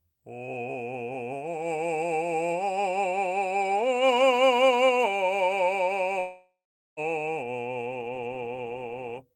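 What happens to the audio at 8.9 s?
Nothing goes wrong at 8.9 s; the music plays through that moment intact, with no dropout, click or distortion.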